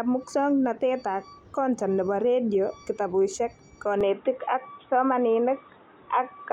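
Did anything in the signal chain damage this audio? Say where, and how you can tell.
Yes, at the driver stage: the input switched to a poorer device at 4.01 s. From there on, nothing reaches above 3.8 kHz and a faint new noise floor appears, with no gap. That new background, not just lost treble, points to a likely microphone change rather than a codec narrowing its band.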